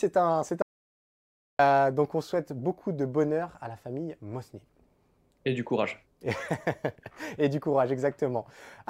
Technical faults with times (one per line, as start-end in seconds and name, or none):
0.62-1.59 audio dropout to silence